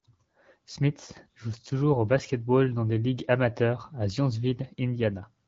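Speech over an HD Voice codec, with no faults.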